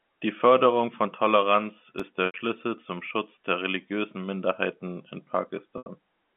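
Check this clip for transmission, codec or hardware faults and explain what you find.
Three faults are audible in this speech clip: one very short dropout and two packet losses, all heard through a telephone-band G.711 line.

Block of digital silence, at 2.00 s: for about 0.67 ms, which fits a 32-sample gap, the output drops straight to zero and jumps back with no fade. The buffer was likely left unfilled in time, and the abrupt edges produce a single sharp tick.

Packet loss with pitch repetition, at 2.26 to 2.34 s and again at 5.78 to 5.86 s: each time about 80 ms of audio goes missing, consistent with four lost packets. The receiver fills the hole by repeating the last pitch period and fading it down, so each spot sounds like a briefly held, buzzy tone that fades into silence before the speech cross-fades back in.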